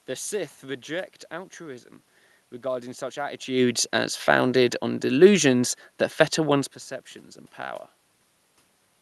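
No technical faults can be heard in the speech. It has passed through a call codec, with the top end stopping at around 12 kHz.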